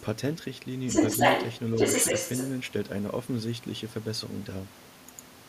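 An echo canceller that likely failed to remove the loudspeaker's signal lets the other side's voice leak through, clearly louder than the talker from 0.87 to 1.59 s and somewhat louder from 1.76 to 2.53 s.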